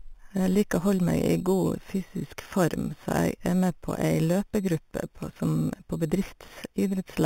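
Throughout the speech, imaging from sample-and-hold upsampling is present: the rate was raised by simply repeating each sample, with no smoothing filter. This fits an 8 kHz source lifted to 48 kHz. Mirrored copies fill 4 to 8 kHz at about 21 dB down, adding a metallic fizz that tracks the voice.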